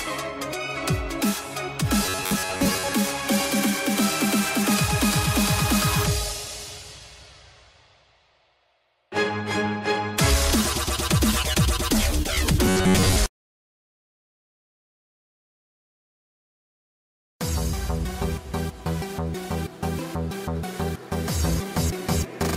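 From 2.06 to 2.95 s and again from 12.66 to 13.17 s, the sound collapses into a rigid, metallic buzz locked near 94 Hz. This is robotic sound from repeated short buffers: most of the audio is likely replaced by looping a roughly 11 ms slice.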